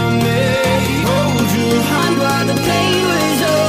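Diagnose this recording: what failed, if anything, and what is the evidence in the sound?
A section at the wrong speed runs from 1.98 s to the end. The sound jumps to 1.18 times normal speed and rises about three semitones, tempo and pitch shifting together. The likely cause is a playback or editing stage resampling that segment against the wrong clock.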